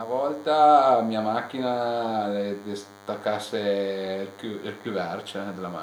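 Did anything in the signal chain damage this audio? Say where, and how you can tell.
Yes. DECT cordless phone buzz sits under the speech for the whole clip, a thin, steady 100 Hz buzz with a dense harmonic series, roughly 25 dB below the speech. It enters at the analogue stage, where the wiring or input circuitry rectifies the DECT radio bursts repeating every 10 ms.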